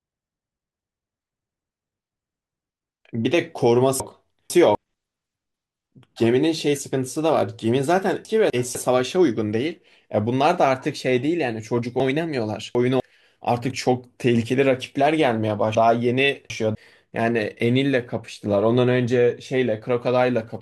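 Chunks out of order at 4.0–4.75 s, 8.25–8.75 s, 12.0–13.0 s and 15.75–16.75 s: a 250 ms chunk of speech plays late, after the two, one, three and three chunks that should follow it. Nothing goes missing, but each span sounds briefly jumbled, with three hard joins where mismatched segments butt together.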